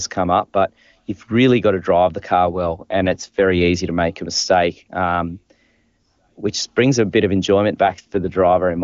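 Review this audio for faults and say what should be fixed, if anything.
AMR rate drop at 2.47 to 3.67 s and again from 7.86 s to the end: on a weak radio link the codec was pushed to a lower rate, and the speech turns rougher and more synthetic without gaps or band loss, which fits a fall from 23.85 to 8.85 kbit/s AMR-WB. Improving radio coverage or link margin would keep the network from forcing the codec down to its lower rates.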